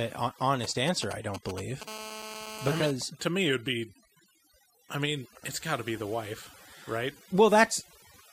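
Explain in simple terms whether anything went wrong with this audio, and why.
Overdone noise removal runs through the whole speech clip: the cleanup was set too hard, leaving a lowered, twinkly background.

GSM signalling bursts appear from 0.64 to 1.83 s, a galloping pattern of ticks and short buzzes from a nearby 2G phone checking in with its network.

GSM phone buzz follows from 1.88 to 2.91 s, a steady, raspy 217 Hz buzz picked up by the audio circuit while that phone was transmitting during a call.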